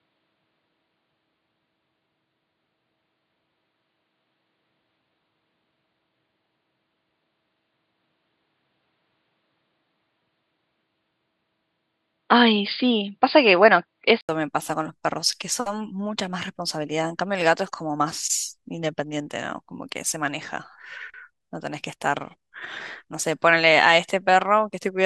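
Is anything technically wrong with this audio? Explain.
Yes. From 0.0 to 14.29 s the speech is band-limited, with nothing above 4.9 kHz, and sounds dull and boxy. It has its own faint noise floor and a level a few dB off. The likely cause is an input switched to a poorer device, which then restores full bandwidth after an 80 ms gap.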